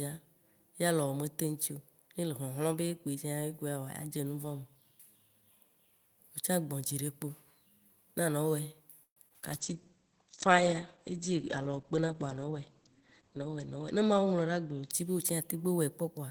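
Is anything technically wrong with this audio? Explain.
Yes. There are four network and playback faults, clustered from about 9 s onward.

Repeated packet loss (robotic sound), 9.03 to 9.45 s: packets went missing four times in quick succession, the longest gap 129 ms, and the receiver filled each hole by extending the preceding sound. About 42% of that stretch is patched, so the speech turns choppy and robotic, with fragments missing.

Call bitrate drop, 9.50 to 16.05 s: the call's bandwidth estimate collapsed and the encoder was forced into coarse coding. The bitrate falls from about 32 to 10 kbps, and at that low rate the audio band shrinks from 20 kHz to 8 kHz. The worst of it lasts about 3.8 s, and the speech sounds muffled, rough and watery.

Jitter buffer slow-down, 9.73 to 9.97 s: with its reserve running low, the receiver repeated short pitch periods to stretch the audio, adding 40 ms. 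Playback drops to 86% speed at unchanged pitch, so the speech sounds briefly drawn out.

Jitter buffer speed-up, 13.22 to 14.27 s: the buffer held too much audio, so the receiver cut short pitch-period pieces repeatedly, removing around 150 ms. Playback runs at 112% speed with the pitch unchanged, and the speech sounds hurried.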